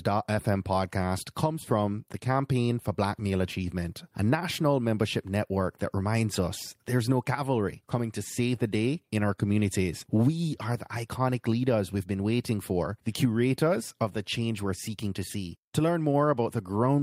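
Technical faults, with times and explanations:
No technical faults are audible in this speech recording.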